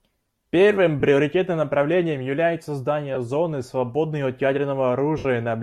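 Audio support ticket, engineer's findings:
Lost LE Audio frames: short noisy smears at 1.00–1.03 s and 3.15–3.17 s, then a longer one that fades toward silence at 5.18–5.26 s. The LC3 decoder is patching dropouts with sign-scrambled repeats of the last spectrum.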